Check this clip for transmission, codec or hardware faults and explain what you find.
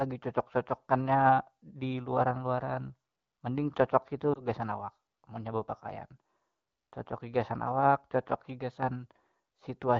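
One transmission fault is audible. Just after "mending cocoki", from 4.34 to 4.41 s, the speech briefly dips or warbles, then returns weak or rough for a moment. This is lost AMR speech frames: a corrupted frame, consistent with one 20 ms frame, was concealed by reusing the previous pitch and vocal tract settings at reduced gain. The AMR wideband (HD Voice) codec around it, at 12.65 kbit/s, keeps the speech clear.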